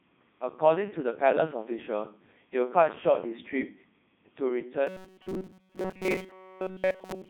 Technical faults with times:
0.00-7.29 Codec 2 vocoder
4.87-7.29 robotic sound from repeated short buffers

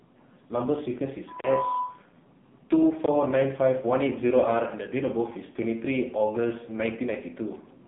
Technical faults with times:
0.00-7.87 AMR narrowband mobile codec
1.40-1.44 block of digital silence
3.06 block of digital silence

